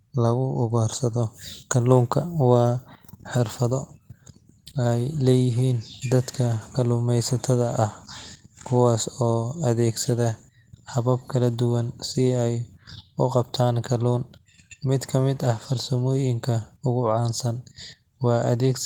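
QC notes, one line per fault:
Nothing to flag here; the speech comes through the Opus voice coding at about 20 kbps in hybrid mode with only light coding character and no problems worth a line.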